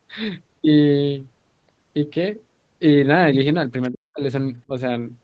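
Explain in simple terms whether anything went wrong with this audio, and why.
Speech suppressed in double talk, from 3.91 to 4.23 s and again briefly from 4.68 to 4.73 s: the speech drops sharply, almost vanishing in the first stretch. The likely cause is the echo canceller mistaking the talker for echo while both sides spoke, and turning everything down.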